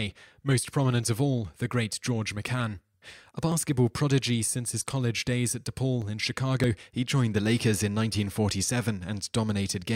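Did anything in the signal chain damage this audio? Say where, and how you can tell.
Yes. Starting at 1.04 s, the speech carries a click roughly every 2.49 s, with the last at 8.50 s, about four in all. That steady spacing points to clock drift buffer slips, likely at the driver or buffer stage between two independently clocked devices. A clock mismatch of a few hundred ppm fills or drains the buffer until a short block, on the order of a few dozen samples, is dropped or repeated, leaving a discontinuity in the waveform each time.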